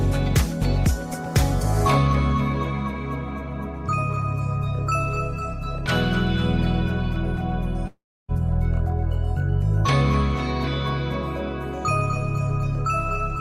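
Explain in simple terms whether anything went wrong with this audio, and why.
From 7.87 to 8.31 s the sound smears into a fading buzz or hiss, then goes silent, and returns with about 0.4 s missing. This is likely a long network dropout. Unlike a brief glitch, the gap lasts long enough for the filler to die away to silence.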